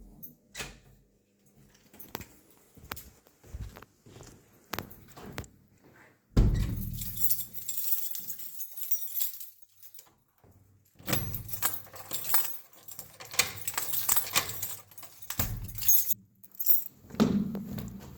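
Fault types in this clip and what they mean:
Short concealed packet loss: Twice near the end, around 15.65 to 15.69 s and again at 16.45 to 16.48 s, roughly 20 ms of audio didn't arrive in time, and the receiver papered over each gap by stretching out the sound just before it and then easing back into the real signal. What you hear is a tiny smear or wobble in the sound at each spot.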